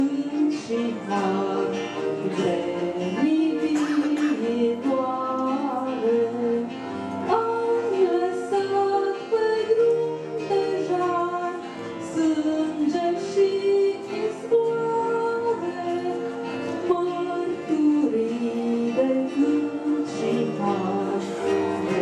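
Nothing is technically wrong with this audio.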